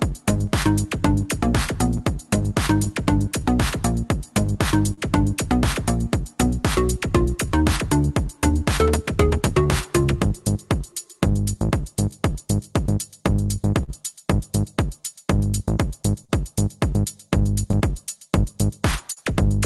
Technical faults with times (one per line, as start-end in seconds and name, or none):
0.00-19.66 clock drift between sender and receiver
0.14-18.46 repeated timing corrections
1.64-2.87 scattered short gaps
4.93-4.99 short stall from a late packet
13.83-13.90 short stall from a late packet
16.25-16.31 short stall from a late packet
17.72-19.19 scattered short gaps